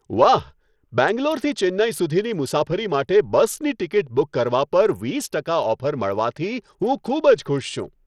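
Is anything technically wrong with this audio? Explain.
Yes. Throughout the speech, the sound has plainly audible Bluetooth SBC compression artefacts, likely from a low bit pool that fits roughly 80 kbps. Starved upper sub-bands lose or flicker their treble, and the coarsely quantised remainder carries gritty noise and aliasing.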